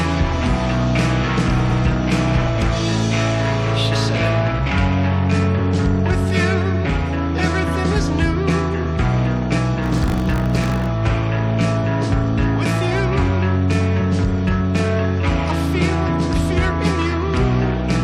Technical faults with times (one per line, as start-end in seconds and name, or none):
9.82-10.87 buffer tearing